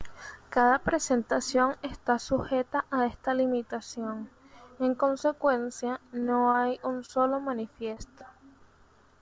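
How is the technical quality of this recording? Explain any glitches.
The recording has five brief glitches, all clustered late in the clip, over a call path whose band stops at 8 kHz, consistent with a wideband call codec.

Short concealed packet loss at 6.20–6.24, 6.52–6.56, 7.06–7.10, 7.94–7.98 and 8.18–8.22 s: about 20 ms of audio arrived too late each time, so the receiver extended the preceding sound and blended back. Each is heard as a tiny smear or wobble, not the silent gap a hard dropout would leave.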